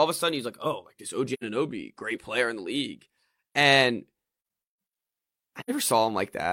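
Speech, interrupted twice by AAC frame loss with muting: the decoder lost frames and replaced their spectrum with silence, and the overlapping windows fade the speech out and back in instead of cutting it. Each gap is a soft-edged hole of roughly 85 ms, which fits two lost frames. The first runs from 1.33 to 1.44 s, just before "great player in the", and the second from 5.59 to 5.71 s.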